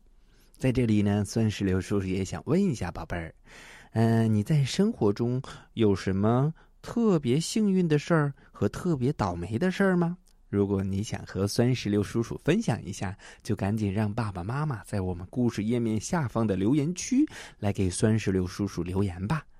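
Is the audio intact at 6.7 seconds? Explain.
Yes, at 6.7 seconds the speech plays through intact, with no dropout, click, distortion or other audible fault at that moment.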